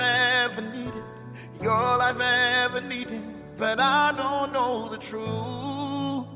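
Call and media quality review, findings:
Call and media quality review found no faults to report.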